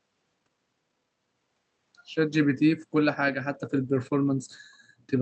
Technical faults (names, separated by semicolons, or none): skip ahead; jitter buffer speed-up